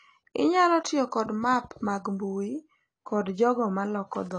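Speech runs through the whole clip with plainly audible AAC compression damage: nothing sounds above 10.2 kHz, consonants are dull and smeared, and sustained sounds and sibilants warble and fizz. The likely cause is AAC-LC at a low bitrate, consistent with about 32 kbps, where coarse quantisation leaves spectral holes and noise-filled bands. That shifting texture separates it from a simple low-pass filter, which would dull the top cleanly without any swirling artefacts.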